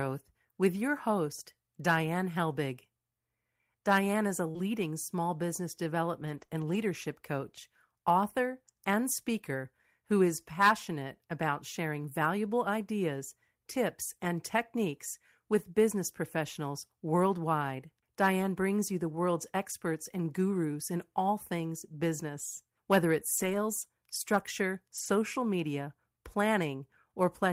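At 4.51 to 4.64 s, between "is a" and "small business", short concealed packet loss occurs: about 40 ms of audio arrived too late, and the receiver extended the preceding sound to fill most of it, adding roughly 10 ms. Within that stretch, at 4.55 to 4.57 s, a lost packet rebuilt from error correction plays a rough 20 ms copy. The span sounds like a quick smear.

From 6.22 to 6.75 s, just before "coach author and speaker", lost packets were rebuilt from error correction over 120 ms and then 140 ms. The decoder played their low-bitrate copies, so the sound stays continuous but turns grainier and noisier. Between those two stretches, at 6.46 to 6.49 s, a 20 ms loss is concealed and heard as a small wobble.

The same low-bitrate rebuilding returns at 23.37 to 23.55 s and at 24.95 to 25.09 s, roughening each stretch without any gap.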